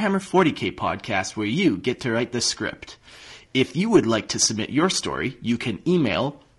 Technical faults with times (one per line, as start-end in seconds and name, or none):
0.00-6.58 low-delay AAC compression